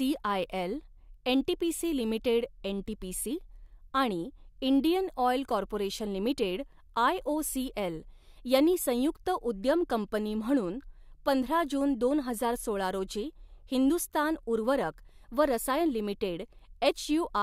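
Nothing stood out as a technical problem on listening to this speech recording.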